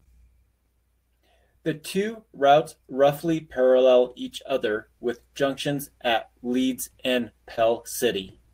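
From 7.55 to 7.59 s, 20 ms of audio missed the decoder; short concealed packet loss extended the preceding speech over the gap, leaving a brief smear.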